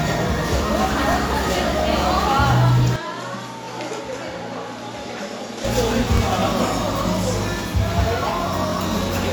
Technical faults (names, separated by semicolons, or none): overlapping chunks; input switched to a poorer device